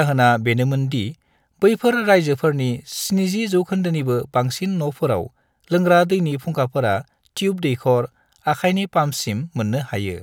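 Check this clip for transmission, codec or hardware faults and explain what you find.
No transmission, codec or hardware faults are audible in this speech recording.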